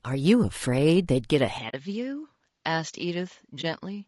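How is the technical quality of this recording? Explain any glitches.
The recording has plainly audible codec damage from start to finish, a change of input partway through, and two short dropouts.

Throughout, the speech has a rough, grainy texture, with noise filling the gaps between the voice's harmonics and an upper band that sounds thin and synthetic. This is most likely low-delay AAC compression of the AAC-ELD kind used in video calls, at a rate that fits about 32 kbps. At this low rate there are too few bits to code each frequency line finely, so noise creeps in between the harmonics and the fine structure smears. Unlike a dropout, it never breaks the sound. It is a constant coarseness.

At 1.58 s the tone changes and stays changed to the end. Nothing remains above 7.6 kHz, the voice becomes duller and a few decibels quieter, and a faint new noise floor appears well beneath it. This sounds like the input switched to a poorer device, likely a different microphone or a headset's call profile. 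There is no silent gap at the change. That, together with a lasting shift in bandwidth, level and background rather than a brief hole, sets it apart from the dropouts.

From 1.69 to 1.74 s, and again from 3.61 to 3.64 s, the sound fades out and back in, for about 40 ms and then about 20 ms. This is AAC frame loss with muting. The decoder filled the missing frames with silence, and the overlapping transform windows taper the edges, so each gap is soft-edged. That soft edge distinguishes it from a hard cut or a buffer glitch.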